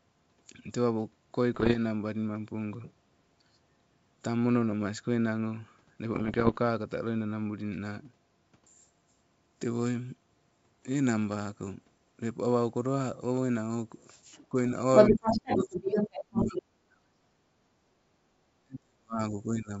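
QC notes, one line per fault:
1.54–1.77 s and 6.14–6.59 s, bit errors on an ADPCM link: two patches of pops and rough, gritty bursts with brief jumps in level, the second one about twice as long. The error rate sounds like something around one percent. Each flipped bit throws off the decoder's step size and prediction, so the damage keeps ringing for a few milliseconds after each hit. That's why it comes out as smeared, crunchy bursts rather than clean clicks, against the otherwise clear wideband G.722 sound.
14.32–14.46 s and 14.96–16.59 s, other side's voice leaking through: a second voice sneaks in, most likely loudspeaker playback that the echo canceller didn't fully strip from the mic. The first scrap is short and faint, roughly 30 dB under the talker. The second runs over a second and a half and is actually a touch louder than the talker, so it sits right on top and is hard to miss.
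14.49–14.76 s, 15.1–15.78 s, 15.94–17.3 s and 18.62–19.8 s, speech suppressed in double talk: the talker's own voice keeps ducking and breaking up while the far side is active, likely the echo canceller failing to tell near speech from echo and turning both down. The drops get deeper as it goes, from roughly 15 dB to 25, 35 and finally around 40 dB. The last one runs right to the end of the clip.
17.58–17.88 s, background gated by the echo canceller: the room tone dips by about 10 dB for around 300 ms, then comes back. The canceller clamped down on the mic while the loudspeaker was playing and let go once it stopped. So you hear the background briefly hollow out and then return, a small pumping effect.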